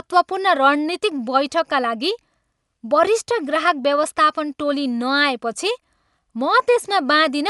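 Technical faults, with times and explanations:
Throughout, Dolby Digital compression: the speech sounds dull, with nothing above 11.4 kHz and a plainly audible rough, fluttering noise around tonal parts. This is likely an AC-3-style encoder narrowing the band and leaving many lines unbitted for dither noise, fitting roughly 64 kbps.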